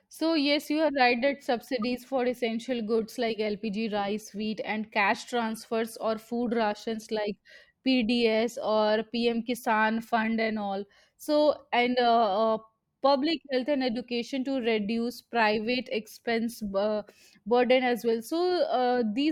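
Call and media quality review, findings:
Corrupt frame decoded at 1.82 s, between "you are right that" and "for essential goods like". Symptom: brief decoding glitch, around -35 dBFS at peak. Component: speech decoder. Mechanism: flipped bits in roughly a couple of compressed frames. Decoder played them anyway. Misread gains and codes put energy at wrong frequencies for about those frames' length.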